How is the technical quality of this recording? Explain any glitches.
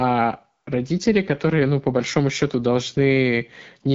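Technical quality is poor throughout, because of plainly audible codec damage.

AMR wideband (HD Voice) codec, whole clip: the speech is rough and raspy, which points to one of its lowest modes, around 8.85 kbit/s. Here a pulse-driven vocal-tract model rebuilds the sound up to 6.4 kHz, with synthetic noise above. On a spectrogram, energy stops sharply near 7.5 kHz, and the top band looks smeared and noise-like.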